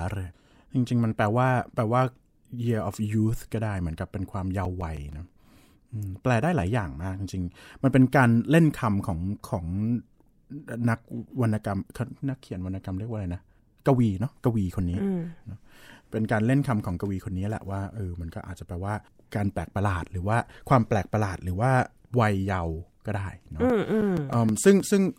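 From 4.34 to 5.60 s and again from 23.54 to 24.80 s, CD scratch ticks: nine evenly spaced clicks each, about seven per second, one per disc revolution where unrecoverable data was patched over. The even spacing sets them apart from random vinyl crackle.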